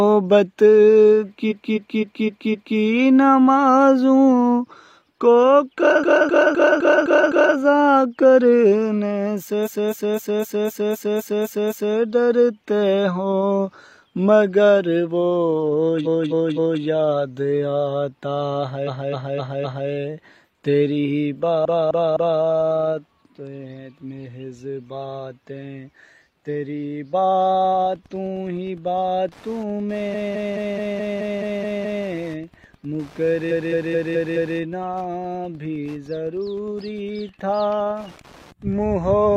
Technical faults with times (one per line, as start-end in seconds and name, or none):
1.47-2.75 repeated frames
5.99-7.53 repeated frames
9.62-11.93 repeated frames
16.02-16.79 repeated frames
18.84-19.86 repeated frames
21.61-22.38 repeated frames
27.52-39.37 Wi-Fi interference
30.10-32.02 repeated frames
33.47-34.54 repeated frames